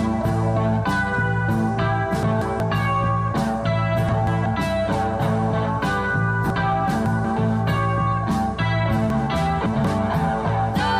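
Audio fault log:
2.23–2.60 s and 4.09–4.46 s: chunks out of order. Each spot has a brief jumbled stutter. One block of about 186 ms plays one block late, swapping places with its neighbour, so three hard joins cut through the waveform.
6.50–7.25 s and 9.10–9.85 s: chunks out of order. These are longer garbled passages, where the sound seems to jump ahead and then back. One 186 ms block arrives three blocks late, after the three that should follow it. Nothing is lost, but the reordering leaves three abrupt joins in each span.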